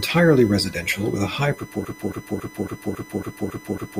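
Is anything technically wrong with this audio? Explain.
Yes, two faults are audible.

USB whine, throughout: a steady 1 kHz tone, strongest at 2 kHz and roughly 25 dB below the speech, from USB bus current in 1 ms frames leaking in through power or ground.

Broken-record loop, 1.85 s to the end, right after "residential with a high": a 0.28 s fragment repeats eight times back to back, likely from a stalled player or stream, and the speech that should follow is lost.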